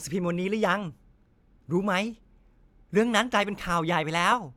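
Nothing in this short bit of speech trips the ear as a technical fault, so there's really nothing here to point to.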